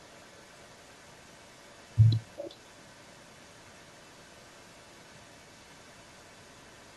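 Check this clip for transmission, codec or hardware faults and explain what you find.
One fault is present: an echo leak running through the whole speech clip, from 0.0 s to the end. A faint delayed copy of the speech trails the original by about 383 ms, sitting roughly 35 dB below it, so it registers as a low ghost behind each phrase. The likely cause is a far end on loudspeaker whose echo canceller failed to fully subtract what its microphone picked up, returning that residue down the line.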